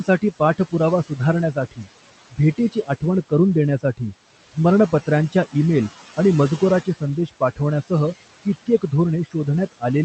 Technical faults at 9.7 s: noise suppressor artifacts; speech cut by the noise suppressor

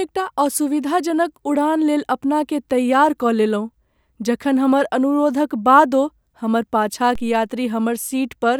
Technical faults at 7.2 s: DC step

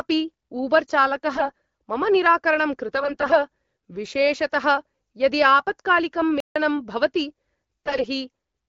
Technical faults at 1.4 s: AMR bit errors

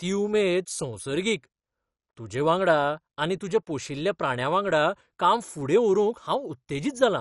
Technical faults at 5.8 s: MP2 compression

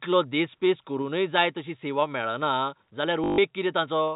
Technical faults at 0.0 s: none

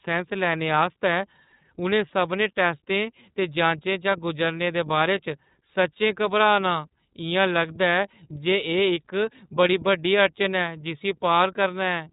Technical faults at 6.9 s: iLBC codec

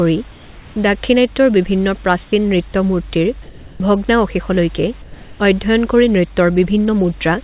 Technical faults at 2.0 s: none

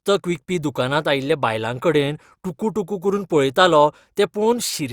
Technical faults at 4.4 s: none

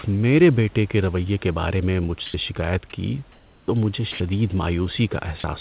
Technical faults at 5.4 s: sound dropped by the voice detector

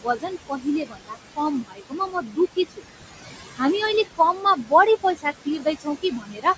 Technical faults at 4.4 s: noise suppressor artifacts; speech cut by the noise suppressor

